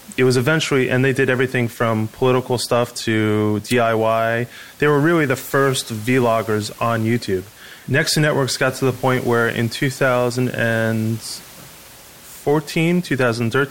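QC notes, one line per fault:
No fault to note for this clip.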